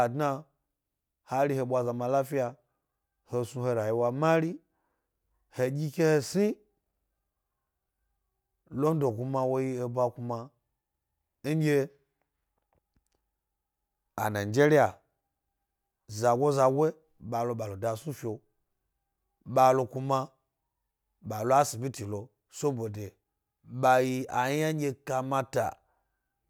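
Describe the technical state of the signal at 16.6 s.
At 16.6 s the signal is intact, with no dropout, clipping, distortion or other audible fault in the speech at that moment.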